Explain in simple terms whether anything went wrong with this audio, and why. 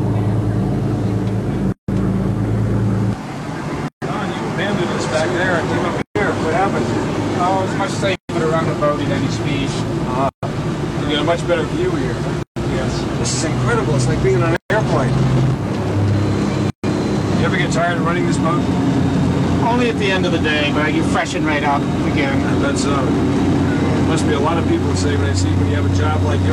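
There's a repeating gap at a join of encoded pieces. The sound drops out briefly at 1.72, 3.88, 6.02, 8.16, 10.29, 12.43, 14.56 and 16.70 s, about 0.16 s the first time and 0.14 s after that. The audio was likely encoded in short chunks and stuck together untrimmed, leaving each chunk's built-in silent padding in place.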